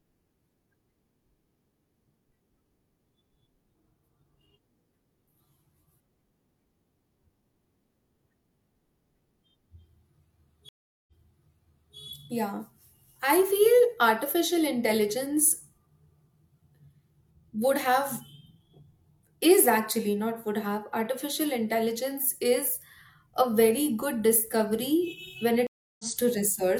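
At 10.69 s the speech drops out for about 0.39 s, then comes back repeating roughly 0.9 s it had already played, running until 11.97 s. At 25.67 s a second gap of about 0.33 s follows, and the speech picks up about a fifth of a second further on by 26.05 s. Both are stream reconnects: the connection broke, the player restarted a decoder mid-stream, and playback resumed from a different point.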